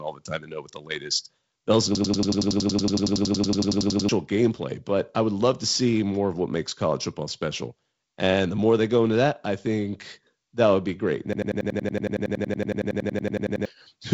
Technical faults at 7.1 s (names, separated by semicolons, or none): none